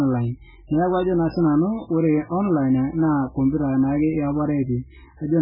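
MP3 compression, throughout the clip: nothing survives above 5.2 kHz, and the speech sounds heavily watery and swirly, with s sounds turning to metallic chirps. This is likely an MP3 encoder starved of bits, pointing to a bitrate near 8 kbps, cutting the treble and letting weak frequency lines flicker between frames.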